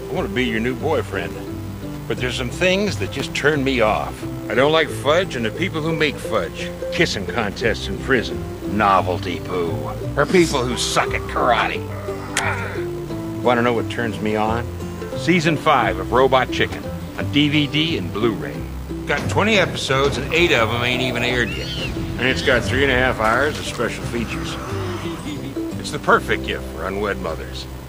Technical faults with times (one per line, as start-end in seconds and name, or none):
none